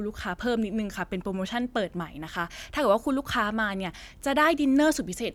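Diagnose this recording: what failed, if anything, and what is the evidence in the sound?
Nothing failed here as far as I can hear: the speech comes across without any dropouts, clicks, distortion or timing glitches from any stage of the chain.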